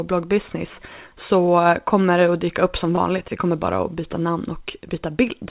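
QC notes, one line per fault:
1.46–1.49 s and 2.95–2.99 s, short concealed packet loss: about 20 ms of audio failed to reach the decoder in time at each point, just before "kommer det att dyka" and just after "att dyka upp som". The receiver bridged each hole by extending the preceding signal and then cross-fading back into the real audio, which produces a brief smear or wobble. The band-limited sound, with nothing above 4 kHz, fits a G.711 A-law call path.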